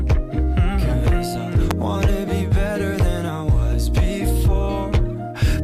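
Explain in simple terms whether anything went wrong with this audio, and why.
At 1.71 seconds there is a single sharp snap, a brief crackle that sits on top of the sound rather than coming from it. This is an electrical switching spike, most likely from a nearby switch, motor or static discharge arcing and leaking into the audio line.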